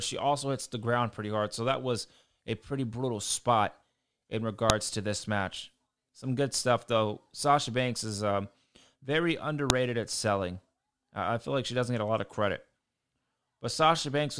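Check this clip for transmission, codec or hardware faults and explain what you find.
Two sharp, loud clicks interrupt the speech, at 4.70 s and 9.70 s. Both are a file header played as audio. The pieces were joined every 5 seconds without stripping each WAV header. Those header bytes play as samples, giving a brief snap at each join.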